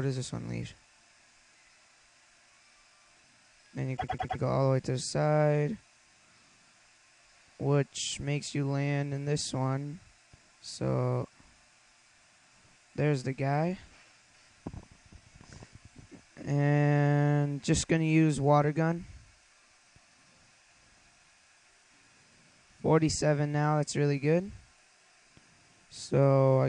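From 3.96 s to 4.38 s the audio stutters. This is a repeated frames fault. A block of about 104.5 ms is played again four extra times. The decoder received the same stretch of compressed data more than once and decoded each copy in turn. The block length fits a run of a few short codec frames. The clip runs 418 ms longer as a result.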